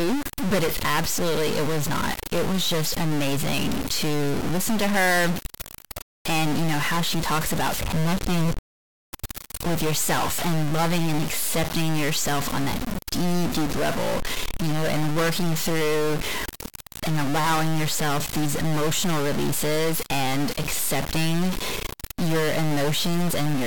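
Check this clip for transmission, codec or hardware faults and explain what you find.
There's one hardware-type fault. Throughout the speech there's harsh, buzzy distortion, likely a stuck bit adding steps around -20 dBFS, which also fills the pauses with noise.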